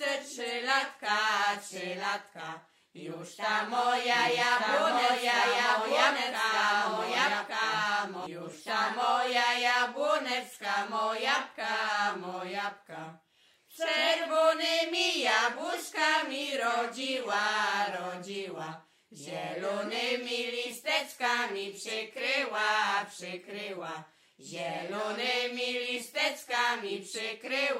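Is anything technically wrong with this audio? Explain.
Yes. From 4.12 to 8.26 s there is a doubled audio track: a second full-band copy, roughly as loud as the original, runs about a second behind. It likely comes from a slower duplicate capture path. Unlike an echo, it has no decay or room colour and starts and stops abruptly.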